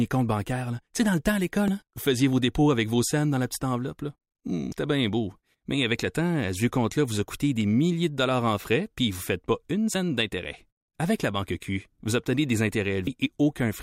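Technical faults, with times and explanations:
1.68, 4.72, 9.94 and 13.07 s: damaged data in a compressed stream. Four isolated 4 ms glitches where corrupt frames broke decoder sync, unlike continuous codec artefacts.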